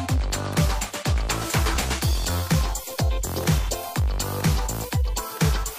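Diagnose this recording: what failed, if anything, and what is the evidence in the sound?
Nothing failed here: I listened for trouble at every stage and found none, so there's no fault to diagnose.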